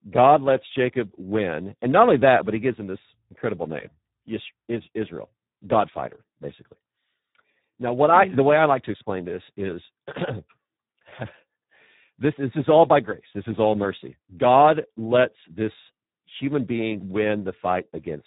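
From start to finish the speech carries heavy Speex codec damage. The CELP coder is starved of bits for the excitation, so voices come out hoarse and noisy, edging toward that robotic, vocoder-like buzz, which fits a narrowband setting around 8 kbps. There's also nothing at all above 3.8 kHz, so the whole thing sounds boxed-in and telephone-thin, with no air or sibilant sparkle on top.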